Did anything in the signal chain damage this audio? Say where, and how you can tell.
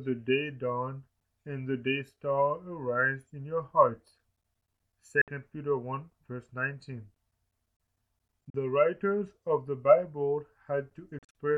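Yes. The sound drops out to silence at 5.21–5.28 s (61 ms), 8.50–8.54 s (41 ms), and in scattered gaps across 11.18–11.35 s totalling 122 ms, then resumes further along as though it had kept playing. This is likely a Bluetooth dropout on the wireless playback link, where late packets were discarded.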